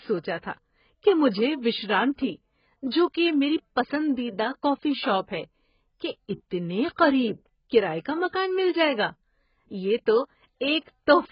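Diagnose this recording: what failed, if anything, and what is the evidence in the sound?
The codec stage failed: throughout the speech, the sound is dull and smeared, with a warbling, fizzy texture on sibilants and sustained vowels, likely from heavy AAC compression. A spectrogram shows nothing above 5.1 kHz and patchy holes in the bands below, refilled with noise-like texture. That fits AAC-LC running at a very low bitrate, around 12 kbps, where the encoder lowers its cut-off and starves the remaining frequency lines of bits frame by frame.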